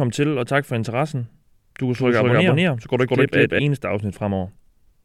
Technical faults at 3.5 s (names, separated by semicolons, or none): doubled audio track